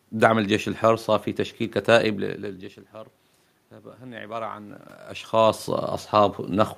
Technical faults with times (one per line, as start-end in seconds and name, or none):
3.98-4.87 automatic gain rising